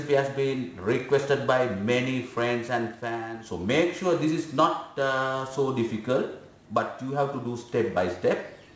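Aliasing runs through the whole clip: content above 8 kHz was folded back down instead of being filtered off, which fits a drop from 44.1 to 16 kHz. Sibilant-range detail turns gritty and metallic, with spurious tones roughly 30 dB under the sound. Plain band-limiting would only sound dull.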